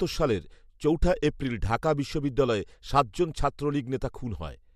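No technical faults can be heard anywhere in the recording.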